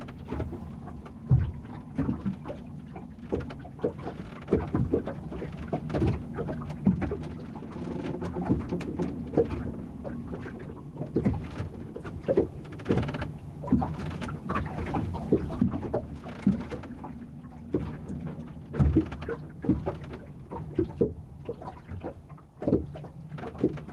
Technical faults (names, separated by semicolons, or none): gain pumping